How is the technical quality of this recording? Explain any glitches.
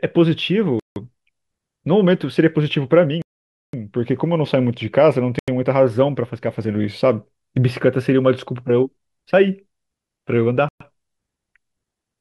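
The speech is broken by four brief dropouts to silence, at 0.80 s (about 165 ms), 3.22 s (515 ms), 5.39 s (87 ms) and 10.69 s (119 ms). This is likely a Bluetooth stall: the wireless link delayed packets, the receiver's buffer emptied, and playback halted until data resumed. Waveform and spectrogram show flat, blank gaps cutting cleanly across all frequencies.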